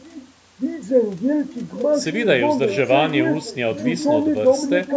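From 0.0 to 0.34 s, a faint, delayed copy of the speech sits underneath the talker: an echo leak, most likely a loudspeaker on the far end whose echo canceller let part of the returning call back into its microphone. The copy trails by 826 ms and is roughly 20 dB quieter. Room reverberation would be a smeared tail arriving within a few tens of milliseconds. This is a distinct, late repeat of earlier speech, heard only as a brief scrap.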